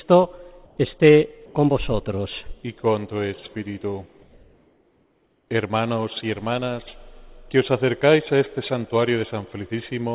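From 0.65 to 0.77 s the background turns into a steady, featureless hiss about 2 dB quieter for 120 ms, likely comfort noise in place of the background after discontinuous transmission paused sending. At 1.46 s, 90 ms of sound vanishes into that same flat noise until 1.55 s, likely sound dropped by the voice detector, which mistook it for background and stopped transmitting. From 4.22 to 5.48 s the detailed background gives way again, for 1.26 s, to smooth synthetic hiss about 2 dB lower, likely comfort noise standing in during a long pause. Throughout, the call path's narrowband codec leaves nothing above 4 kHz.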